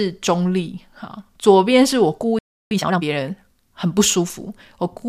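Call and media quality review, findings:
Playback stall, 2.39 to 2.71 s. Speech cuts out mid-flow into silence for about 0.32 s, then resumes. Likely cause: the player starved of data or its output thread blocked. The jitter buffer or decoder feed is the probable component.

Time-compressed catch-up, 2.71 to 3.03 s. Speech right after the gap runs hurried at twice normal speed. Pitch stays normal. The player drains its backlog by dropping short segments and cross-fading the joins.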